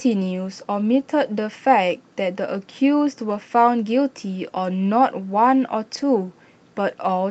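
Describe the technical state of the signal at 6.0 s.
Around 5.93 to 6.03 s there is a lost packet rebuilt from error correction: lower-quality redundant copies stand in for several missing packets, so nothing drops out. The sound turns rougher and noisier, with a continuous waveform and grainier, smeared spectrogram detail, all below the call path's 8 kHz ceiling.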